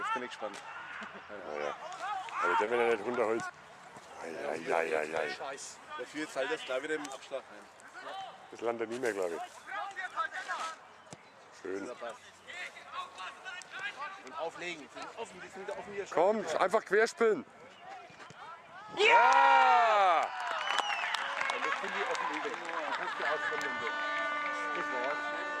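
Three short concealed packet losses turn up close together, at 2.65 to 2.69 s, 3.47 to 3.51 s and 3.67 to 3.71 s. Each time about 20 ms of audio didn't reach the decoder in time, so the receiver patched the gap by extending what it had just played and then eased back into the real signal. You hear each one as a quick smear or little wobble rather than a clean dropout.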